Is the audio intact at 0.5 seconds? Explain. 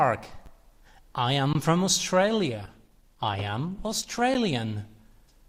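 No. Just before the half-second mark, at about 0.46 s, there is a brief tick, a single sharp click where the sound drops out for an instant and snaps straight back. It is a block of digital silence lasting 10 ms. A stretch of samples was replaced with zeros, most likely because the output buffer wasn't filled in time. The abrupt cut to zero and return, with no fade, creates the click.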